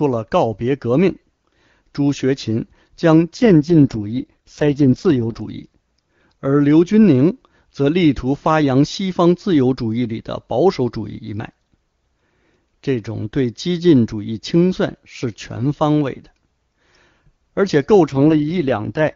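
A speech clip on an HD Voice call, with two AMR rate drops. From 3.37 to 5.42 s, and again from 18.06 s to the end, the voice turns rough and buzzy while the bandwidth stays put and nothing cuts out. That sounds like the network pushing the AMR-WB codec from around 23.85 down to about 6.6 kbit/s on a weak link and spending the freed bits on error protection. The clearer wideband sound comes back between the drops.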